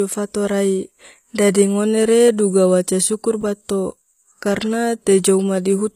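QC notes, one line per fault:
Throughout: HE-AAC compression, likely. The top end sounds bright but synthetic, with nothing above about 15.5 kHz, and the s sounds come across gritty and a bit lispy. That fits a codec that codes only the lower band and rebuilds the treble by copying lower bands upward under a coarse envelope. The copied harmonics don't line up with the real ones, so the damage is plainly audible and suggests a low bitrate of around 24 kbps.
3.41 to 3.43 s: chunks out of order. There's a short jumbled blip, about 20 ms long. It sounds like a 10 ms chunk landed one chunk late and played after the piece that should have followed it. Nothing is actually missing, but the sequence is scrambled, with three hard joins between mismatched chunks.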